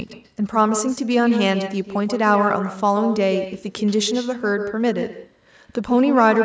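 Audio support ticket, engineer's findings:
Echo with no canceller, whole clip. Speech shadowed by a quieter, thinner copy about 8 dB down, arriving around 150 ms late. Far-end loudspeaker audio re-captured by the far-end mic, returned over the network with nothing cancelling it. Not room reverb: a distinct delayed repeat rather than a smooth decay tail. Band stops at 8 kHz, consistent with normal call mic processing.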